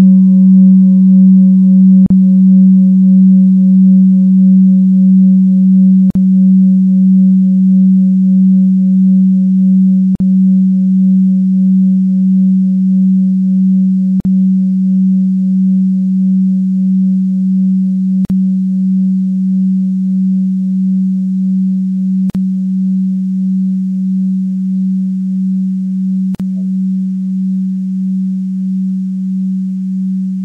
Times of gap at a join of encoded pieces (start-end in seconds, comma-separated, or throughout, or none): 2.06-2.10, 6.10-6.15, 10.15-10.20, 14.20-14.25, 18.25-18.30, 22.30-22.35, 26.35-26.40